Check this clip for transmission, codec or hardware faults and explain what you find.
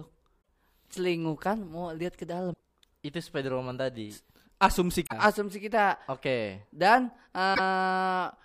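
The speech has one codec fault, recurring four times. Damaged data in a compressed stream occurs at 0.38–0.45 s (before "celingukan mau lihat ke"), 2.50–2.61 s, 5.03–5.13 s (before "asumsi kita oke okay") and 7.51–7.59 s. Corrupted bytes make the decoder misread frames and hunt for the next valid header, leaving a brief chirp, squawk, click or short hole.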